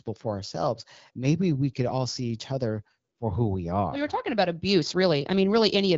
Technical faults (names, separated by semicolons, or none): none